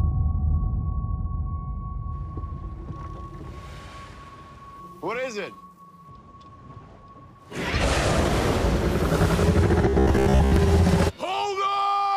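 Near the end, from about 9.89 to 10.56 s, the sound turns into a robotic buzz, the classic robotic sound from repeated short buffers. Instead of moving on, it keeps looping a tiny slice of itself, so a flat, metallic tone of about 66.7 Hz sits on top. That fits a repeated chunk roughly 15 ms long. Most of that stretch is repeats rather than real audio, likely because new audio was arriving too slowly and the playback filled the gaps.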